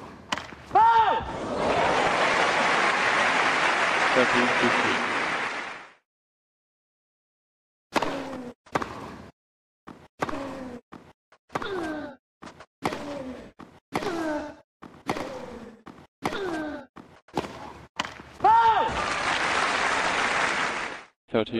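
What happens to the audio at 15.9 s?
At 15.9 s the clip is inside a doubled audio track that runs from 14.02 s to 16.02 s. A second, full-band copy of the same sound trails the original by roughly a tenth of a second, around 10 dB quieter, with no decay or room colouring. The likely cause is the signal being captured again over a slower path, or an edit leaving two copies out of step. The copy cuts in and out abruptly at the span's edges.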